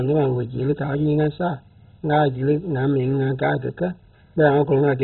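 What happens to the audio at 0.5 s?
At 0.5 s the speech carries the dull, gurgling, granular sound of heavy MP2 compression, likely, present for the whole clip and pointing to a very low bitrate near 16 kbps. Starved of bits, the upper sub-bands switch off, so a spectrogram shows nothing above 4.1 kHz, with blocky, flickering patches below.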